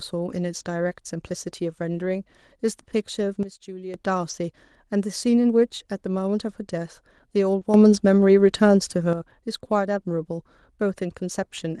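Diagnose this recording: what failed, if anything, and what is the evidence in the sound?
Network stage, on the Opus call path with its roughly 12 kHz bandwidth: there's a lost packet rebuilt from error correction at 1.97–1.99 s, 4.29–4.31 s and 7.61–7.63 s. Each time, 20 ms of speech came from the low-bitrate copy carried in the next packet, so there's no gap, just a brief rougher, noisier patch.

There's a sudden gain jump on the speech from 3.43 to 3.94 s, dropping about 12 dB, and from 7.74 to 9.13 s, rising about 8 dB. Voice and background shift level together with no ramp, most likely from a digital gain setting in the call processing being applied instantly rather than faded.

There's also a short concealed packet loss at 7.59–7.63 s, at the network and jitter-buffer stage. The first 20 ms never arrived and the decoder filled it by extending the preceding sound, which gives a small smear or wobble. 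The next 20 ms is the error-correction rebuild mentioned above.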